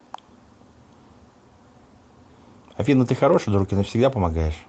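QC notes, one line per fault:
The speech came through an Opus call path at 40 kbps with its audio band ending near 8 kHz, and nothing in the signal departs from what that path normally produces.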